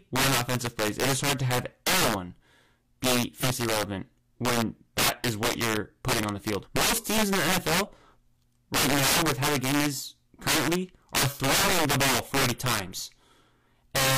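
Integer overflow runs through the whole speech clip: the signal is driven about 16 dB too hot, and a small share of samples, roughly one in twenty, wrap to the opposite extreme instead of being limited. Each loud peak becomes a violent crack. On the waveform, peaks flip from top rail to bottom; on the spectrogram, full-band vertical streaks appear.

Damaged data in a compressed stream strikes at 3.39 to 3.44 s and again at 6.60 to 6.66 s. Each time the decoder misreads corrupted frames and loses sync, producing a brief chirp or squawk. These show as short smeared or blocky patches breaking the spectrogram's normal texture.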